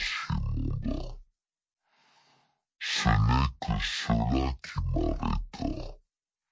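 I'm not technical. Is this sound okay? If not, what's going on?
No. The whole clip, from start to finish, has a wrong sample rate fault. The audio is being played back at half the speed it was recorded at, with nothing to correct for it. Speed and pitch drop together, so everything runs twice as slowly and sits a full octave (12 semitones) lower than it should, giving a deep, dragging sound. That fits audio recorded at 32 kHz being played as if it were 16 kHz.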